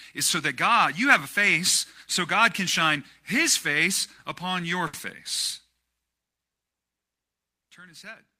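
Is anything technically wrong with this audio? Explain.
Yes. From 4.87 to 4.96 s, just after "his face upon your", there is a short stall from a late packet. The jitter buffer ran dry, so the receiver stretched the last sound by about 60 ms until the packet arrived. Unlike packet loss, nothing is skipped: the speech resumes exactly where it paused, about 60 ms later.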